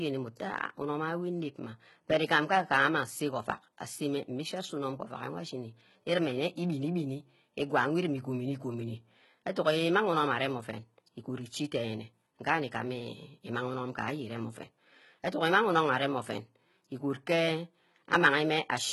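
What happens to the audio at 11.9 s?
At 11.9 s the speech is likely passing through heavy HE-AAC compression, which runs through the whole clip: only the lower spectrum is coded, and the treble is rebuilt by copying lower bands upward, consistent with a bitrate near 16 kbps. Sibilants therefore sound gritty, metallic or lispy.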